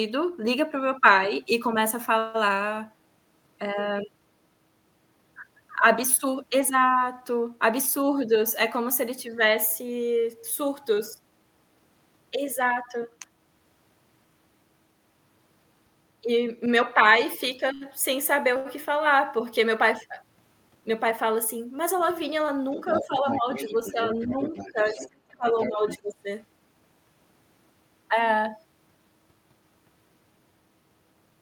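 At 17.74 s and again at 18.57 s, a short stall from a late packet occurs: the packet had not arrived when due, so the jitter buffer ran dry and the receiver stretched the last bit of speech until it turned up. The first hold runs to 17.84 s and fills about 66 ms; the second runs to 18.68 s and fills about 87 ms. Nothing drops out. Each time a sound simply hangs on too long, with a faint buzz or dip, and the stream lands that much later.

From 20.63 to 20.91 s comes a jitter buffer speed-up. After those stalls the buffer was holding more audio than its target, so the receiver trimmed out small slices, one or a few pitch periods at a time, in quick succession. Around fifty milliseconds disappear this way, and the speech plays at about 115% of its pace without any change in pitch, giving a brief hurried, clipped feel.

Between 22.72 and 25.99 s the other side's voice leaks through. A second voice sits underneath the talker at roughly 10 dB below the speech. 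The likely cause is that the talker's device was playing the far end over a loudspeaker and its echo canceller failed to strip all of that playback out of the microphone signal, so the far-end speech rides along in the outgoing audio.

Overlapping that, from 22.88 to 26.06 s, the talker's speech is suppressed in double talk. With both parties talking at once, the echo canceller likely could not tell its own talker apart from the loudspeaker echo and pulled everything down together. Over about one and a half seconds in total, the talker's voice sinks in level by as much as about 10 dB, in uneven pieces while the other voice is present.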